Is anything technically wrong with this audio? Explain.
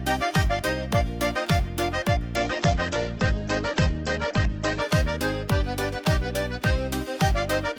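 Yes. From 2.4 to 4.93 s there is a call bitrate drop: the encoder was starved of bits, which fits a fall from about 48 to 10 kbps, and it narrowed the audio band from 20 kHz to 8 kHz. The sound turns coarse, watery and muffled for roughly 2.4 s before recovering.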